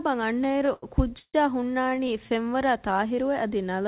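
From 0.44 to 1.36 s the speech stutters with repeated stalls: eight times the jitter buffer runs dry and the receiver stretches the last sound to cover the wait, about 297 ms in all, the longest hold 145 ms and faded, roughly a third of that span. A second, lighter burst from 1.84 to 2.10 s has five short holds totalling 67 ms. Unlike packet-loss dropouts, nothing is skipped; the speech drags and then resumes where it left off, over a telephone-band call path with nothing above 4 kHz.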